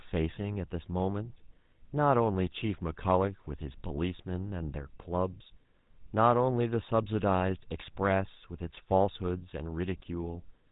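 A buzzy, gravelly roughness sits on the speech from start to finish, with nothing audible above 4 kHz. That is the GSM full-rate codec, which rebuilds the voice from a vocal-tract model driven by sparse regular pulses, at a rate that fits 13 kbps.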